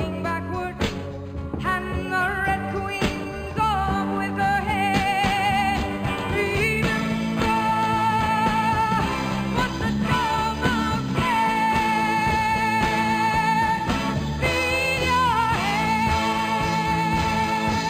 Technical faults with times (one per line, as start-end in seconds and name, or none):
0.00-17.89 imaging from linear upsampling